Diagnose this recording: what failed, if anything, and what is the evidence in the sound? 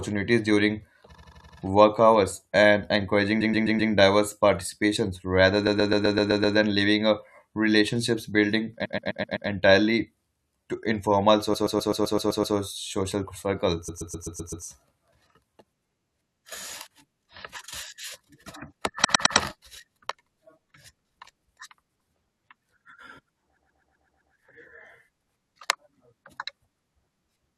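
The speech stutters from repeated frames at 1.14–1.57, 3.40–3.91, 5.66–6.56, 8.84–9.48, 11.53–12.55, 13.88–14.64, 19.04–19.36 and 23.56–24.33 s. Each is a block of mostly 128 ms (85 and 107 ms in two cases) replayed three to eight times. This points to the codec or storage stage, where a run of compressed frames was written more than once and decoded again. A spectrogram shows identical tiles side by side, and the waveform shows a copied segment.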